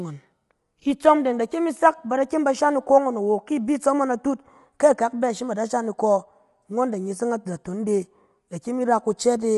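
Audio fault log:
throughout: low-delay AAC compression. Rough, grainy speech with noise between harmonics and nothing above 11.6 kHz; this likely comes from low-bitrate low-delay coding, unlike a plain low-pass cut.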